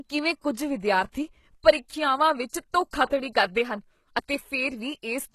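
The sound was most likely squeezed through HE-AAC compression at a very low bitrate, with damage consistent with roughly 16 kbps, present from start to finish. Only the lower spectrum is coded properly; the treble is synthesised by copying lower bands upward under a coarse envelope, and nothing reaches above 12.3 kHz. The result is plainly audible: the top end sounds false, and s sounds come out gritty, metallic or lispy.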